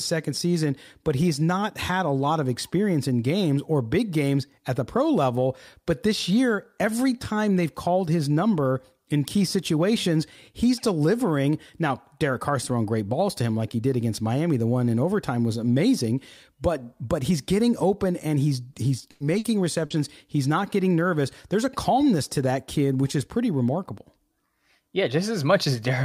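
At 18.73 to 18.78 s there is a short stall from a late packet. The jitter buffer ran dry, so the last speech sound is held for about 20 ms with a faint buzz. Nothing is lost, and playback resumes from the same point, now running about 20 ms later.

Two bursts of packet loss follow at 19.11 to 19.23 s and 19.38 to 19.47 s. In each, the decoder extended the last sound and let it fade, for 90 ms and then 60 ms. About 60 ms of speech is missing after each before the audio picks up further on. The first burst adds another 30 ms of delay.

At 19.86 to 19.93 s, short concealed packet loss fills about 40 ms with continued, blended sound that is heard as a brief smear. Around 60 ms of speech is skipped, and the delay shortens by roughly 20 ms.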